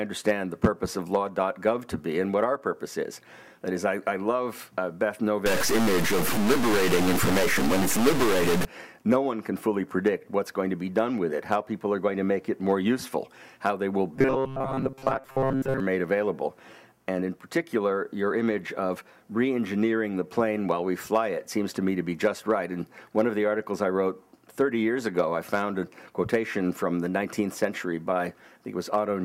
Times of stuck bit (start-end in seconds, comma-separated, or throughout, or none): 5.46-8.65